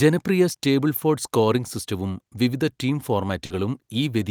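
At 0.52 to 0.55 s, just before "സ്റ്റേബിൾഫോർഡ് സ്കോറിംഗ് സിസ്റ്റവും വിവിധ", a short concealed packet loss fills a 20 ms gap by extending the preceding speech, heard as a brief smear. At 3.45 to 3.51 s, after "സ്കോറിംഗ് സിസ്റ്റവും വിവിധ ടീം", a burst of packet loss drops 50 ms. The concealment prolongs and fades the last sound before the speech resumes further on.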